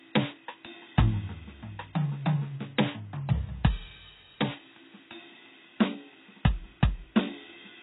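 From start to finish the music carries plainly audible codec damage, likely from HE-AAC compression at a bitrate that sounds close to 16 kbps. Only the lower spectrum is truly coded. The treble is synthesised by copying lower bands upward under a coarse envelope, so its harmonics fail to line up with those below. Unlike plain AAC at such a rate, which would simply dull the top end, the treble here is present but artificial.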